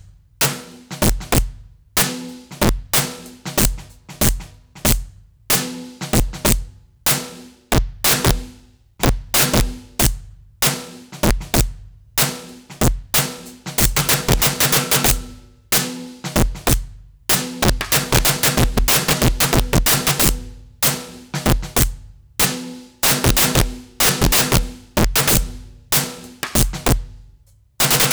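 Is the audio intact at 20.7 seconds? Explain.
No. At 20.7 seconds the music is hit by integer overflow, which runs through the whole clip rather than starting or stopping near that moment. The signal is driven roughly 18 dB past full scale, and instead of being held at the ceiling, each peak that exceeds the largest integer wraps around to the opposite sign. A small share of samples, around 7 percent, jump across the full range this way, producing violent cracks on loud passages that are far harsher than ordinary clipping.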